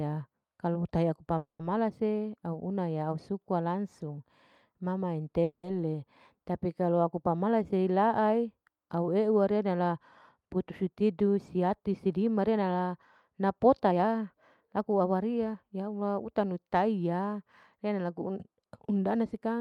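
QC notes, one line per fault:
1.37–1.61 s and 5.43–5.65 s, call audio freeze: the speech stalls and the last sound is drawn out as a fading buzz, sinking to about 130 ms of silence in the first stop and only about 10 ms in the second. When the sound resumes, it picks up exactly where it left off. Nothing is lost, but 220 ms and 200 ms gaps are inserted. The likely cause is delayed packets draining the jitter buffer, so the receiver extended what it last had.
10.83–12.85 s and 13.91–15.72 s, jitter buffer speed-up: the speech sounds hurried, running at 108% and then 113% of normal speed with its pitch unchanged. The buffer held more audio than its target. To work off that extra delay, the receiver cut many short pitch-period slices, trimming about a fifth of a second in each stretch.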